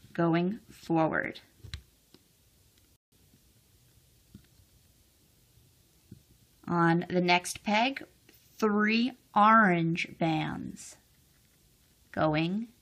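At about 2.96 s the playback hits a rebuffering stall: the player drained its downloaded audio and had to wait for more to arrive. You hear the sound drop to dead silence for roughly 160 ms, until 3.12 s, and then it picks up exactly where it left off. Nothing gets skipped or repeated. The clip just gains that extra 159 ms of gap.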